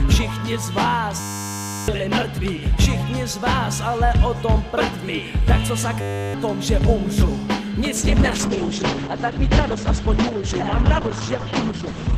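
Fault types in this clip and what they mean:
System hang loop: at 1.2 to 1.88 s and 6.01 to 6.34 s, a frozen system kept replaying one 10 ms buffer, giving a steady 100 Hz buzz.
Call bitrate drop: from 7.96 s to the end, the encoder's bitrate fell from 96 to 9 kbps, cutting bandwidth from 20 kHz to 8 kHz, so sound turns muffled and rough.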